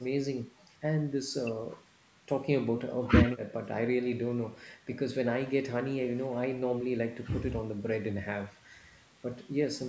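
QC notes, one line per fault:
No faults found; the speech shows normal call microphone processing, with the lowest bass rolled off and nothing above 8 kHz, as expected for that path.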